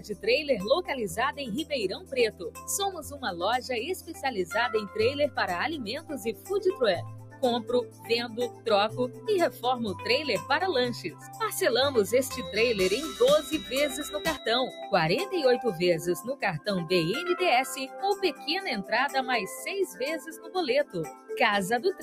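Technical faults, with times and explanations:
Throughout: noise suppressor applied to music or sounds. A speech-tuned suppressor stays active on material it wasn't built for, treating sustained and ambient content as noise. Its gain swings by around 10 dB as it reacts, so the level pumps and the texture thins. A waveform shows an uneven, breathing envelope. A spectrogram shows steady bands and decays fading in and out while onsets mostly keep their energy.
0.00–0.26 s, 1.38–3.40 s, 4.00–4.24 s, 5.99–6.50 s, 7.04–7.43 s, 7.84–10.04 s, 11.04–11.40 s and 19.92–21.30 s: sound cut by the noise suppressor. In each span the suppressor judges the sound to be noise and pulls it down harder than its surroundings, by about 11 to 13 dB at the deepest. Held portions sink and decays end early, while sharp attacks still come through. The longest spans, at 1.38–3.40 s and 7.84–10.04 s, each lose roughly a second in total. 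A waveform shows dips in amplitude. A spectrogram shows tails chopped off and steady energy darkening across the band.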